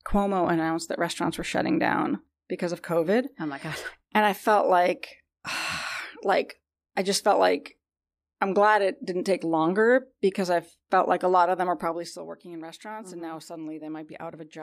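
Zipper noise runs from 11.76 to 12.27 s in this speech clip, just after "lot of them are" and ending before "working in restaurants". Over that half second the level falls by around 15 dB, but it drops in a staircase of roughly a hundred small jumps per second rather than a continuous slope. Each unsmoothed jump leaves a tiny click, and together they form a fine ticking rasp riding on the sound while the gain moves.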